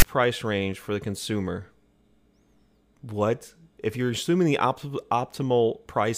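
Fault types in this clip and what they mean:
File tags played as audio: The speech clip opens with about 0.03 s of hard-edged static, from 0 to 0.03 s, just before "range for the consumer". A block of text tags was read as though it were samples. The text bytes give a harsh rasp pushed off to one side of zero. The zero padding after them plays as silence. The burst starts and stops abruptly, with no fade at either edge.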